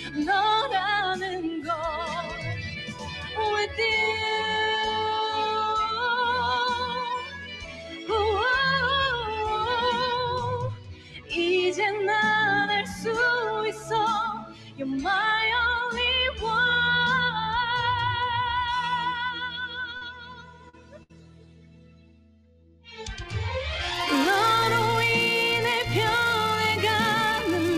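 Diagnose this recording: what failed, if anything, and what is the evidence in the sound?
A speech-style noise suppressor in the call processing chain has been left running on material it wasn't built for, producing a noise suppressor applied to music or sounds effect across the whole clip. Level swings by roughly 15 dB as it decides what counts as noise. Onsets punch through, but anything steady or decaying gets pulled down, so the audio pumps and thins rather than sitting at a stable level.

You can point to specific spots where sound gets cut by the noise suppressor: 0.0–0.18 s, 1.22–3.79 s, 7.19–8.1 s, 10.71–11.32 s, 12.83–13.06 s, 13.72–13.91 s, 14.35–14.89 s and 19.31–23.27 s. Dips run from about 6 dB up to about 16 dB, deepest around 10.7 s, 14.4 s and the long 19.3–23.3 s stretch. Sustained parts sink and tails get clipped short while the sharper hits survive.

On the network side there's short concealed packet loss at 19.97–20.03 s and 20.69–20.75 s. 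Each hole is about 40 ms, and the decoder papered over it by extending what came just before for roughly 35–41 ms before crossfading back. Listen for a quick smear or wobble rather than a dropout.

A burst of packet loss follows at 21.03–21.11 s, with about 60 ms gone. Concealment stretched the previous sound for roughly 64 ms and faded it out, so you hear a held tone or hiss dying away, then playback picks up a bit later with that chunk simply missing.

From 23.93 s to the end there's a filter restarted on every block, a processing-stage bug where the filter's state gets wiped between blocks. Each block starts from silence and throws a tiny transient, giving a buzz at 345 Hz that tracks the signal's level. That rate fits 128-sample blocks.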